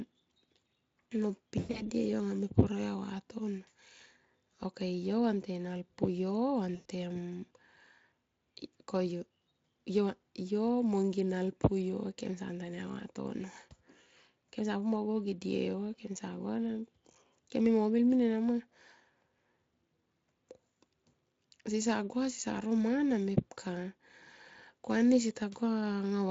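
Speech with VoIP packet loss concealed by the speech codec at 1.59 to 1.83 s, where about 140 ms of gaps are scattered across 160 ms with a longest run of 100 ms, and at 6.75 to 6.86 s, about 100 ms. The decoder stretches the last pitch into a sound that fades, and the voice stays weak as frames rebuild. The Speex coding, at 23.8 kbps, adds only light coding damage.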